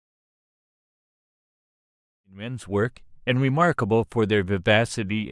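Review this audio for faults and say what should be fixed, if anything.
Nothing needs fixing; no faults are audible here.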